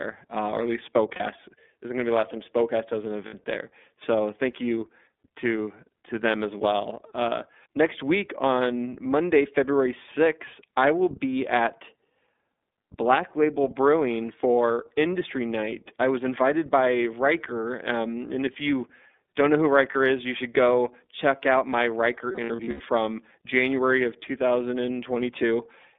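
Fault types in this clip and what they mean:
iLBC codec: narrowband speech coding with self-contained 30 ms frames; the speech is band-limited to roughly 250 Hz to 3.6 kHz and sounds plainly rough and synthetic.
Lost iLBC frames: dropped packets concealed by repeating the last pitch cycle with added noise, heard as brief buzzy held vowels after "uh or at least", "does an", "you don't know who", and scattered around 22.3 to 22.8 s.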